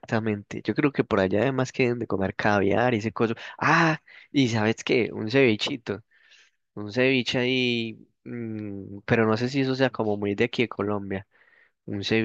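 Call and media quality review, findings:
No faults found in the speech recording. No symptom to log, and no component or mechanism to attribute.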